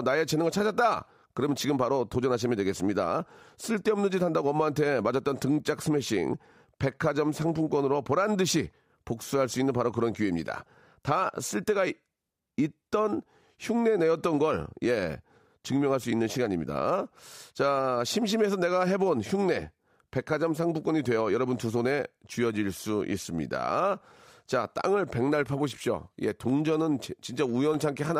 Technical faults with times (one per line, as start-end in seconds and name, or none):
26.50-27.99 periodic USB or driver dropouts